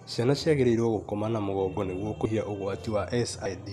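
Compressed frames skipped at 2.25 s, just after "gũkoma na mũgongo nĩguo", and at 3.45 s in this speech clip. Missing or rejected frames make the audio jump ahead about 200 ms and 70 ms, consistent with several 26 ms frames dropped.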